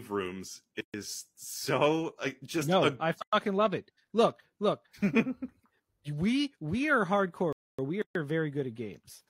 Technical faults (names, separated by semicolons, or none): gap at a join of encoded pieces; playback stall